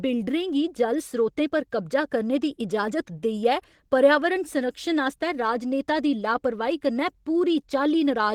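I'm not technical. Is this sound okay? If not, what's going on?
No. The whole clip, start to finish, has plainly audible Opus voice compression. The lower part of the voice is rebuilt from a simplified model and the top is coded separately and coarsely, so speech sounds grainy and slightly robotic.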